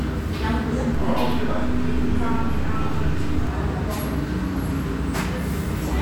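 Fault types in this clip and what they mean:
DC step: At 0.95 s the waveform's zero line jumps to an offset of about -22 dBFS, holds there, and returns at 3.47 s. Each shift is heard as a low thump or click, while the sound carries on unaltered between them. Unlike a dropout or click from lost data, nothing is missing from the sound itself. Unlike hum or rumble, the offset is silent while it holds, and only its two edges can be heard.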